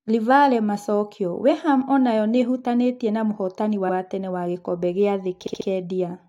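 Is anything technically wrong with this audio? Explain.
Yes, there are two instances of repeated frames in this speech. At 3.88 to 3.95 s, a block of about 70 ms plays twice. At 5.46 to 5.67 s, the same size of block plays four times in a row. In both cases a run of compressed frames, about 70 ms long and consistent with three frames, was written or sent more than once, so the decoder plays it again. Each instance sounds like a stutter and lengthens the clip, by 70 ms and 0.21 s respectively.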